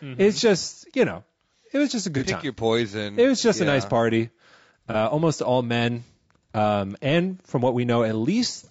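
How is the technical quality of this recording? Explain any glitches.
The speech sounds rough and grainy throughout, with two brief smeared glitches.

Across the whole recording the sound has noise between harmonics and a thin, synthetic top, likely from low-delay AAC compression (AAC-ELD), consistent with roughly 32 kbps, where short frames resolve pitch poorly.

From 2.18 to 2.23 s, right after "it was just a", and from 4.91 to 4.96 s, just before "almost all men um", a short smeared, noisy patch replaces the signal. This is AAC frame loss with concealment: roughly 30 ms went missing, which fits a single lost frame, and the decoder filled it in from the preceding spectrum.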